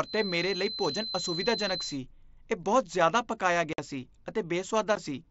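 A speech clip over what sounds like a wideband Bluetooth headset link. For the first 2 s there's a thin, single-pitch feedback whistle at about 4.1 kHz that slowly swells and fades, sitting around 10 dB under the speech, most likely the loudspeaker-to-mic loop hovering right at the edge of feedback. Then there's unconcealed Bluetooth headset packet loss: a hard-edged 52.5 ms hole at 3.73 to 3.79 s just after "ਜ਼ਿਆਦਾ ਪਕਾਇਆ", and a shorter 15 ms dropout at 4.95 s, both gaps where lost packets left silence or an idle pattern with nothing patching them over.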